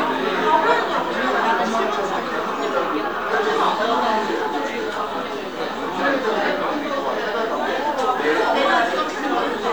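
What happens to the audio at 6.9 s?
Nothing goes wrong at 6.9 s; the audio plays through that moment intact.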